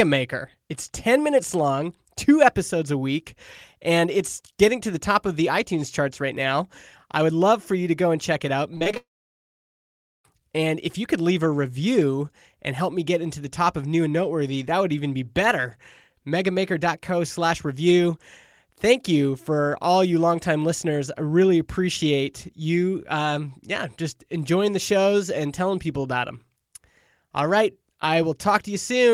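Right after "and check it out", from 8.75 to 8.97 s, there's repeated packet loss: short gaps up to 32 ms, patched by stretching the last sound, so it turns choppy and robotic. Then, from 8.97 to 10.25 s, the audio buzzes briefly and goes silent for about 1.2 s. That's likely a long network dropout, with the missing stretch never coming back.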